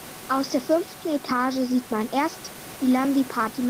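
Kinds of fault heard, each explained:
No system faults heard in the speech; the room noise sits about 20 dB below it and belongs to the recording.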